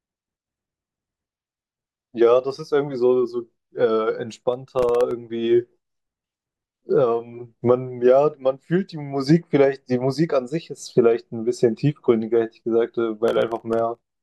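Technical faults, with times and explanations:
4.43–5.11 s, processor overload crackle: the speech picks up a gritty, tearing crackle for about 0.7 s. Each hard-edged dropout of silence is tiny, which fits buffers under a millisecond, with roughly fifteen missed as the processor fell behind repeatedly.
13.28–14.10 s, processor overload crackle: the same crackle returns near the end for about 0.8 s. The dense run of clicks points to around twenty missed buffers, each gap filled with silence, until the load eased.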